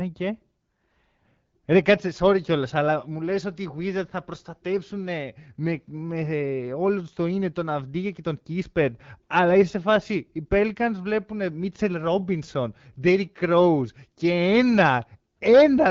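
Nothing stood out on listening to this speech clip, which comes through an AMR wideband (HD Voice) codec at 12.65 kbit/s.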